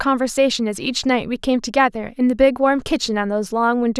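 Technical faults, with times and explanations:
No technical faults are audible in this speech.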